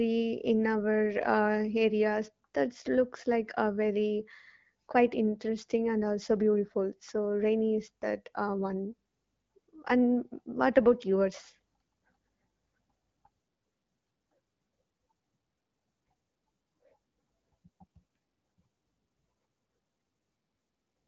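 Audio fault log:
No faults were found in the clip. The speech shows the narrow top end and slight coding texture of an AMR wideband (HD Voice) link, with nothing heard above about 7.5 kHz, which fits the 12.65 kbit/s mode.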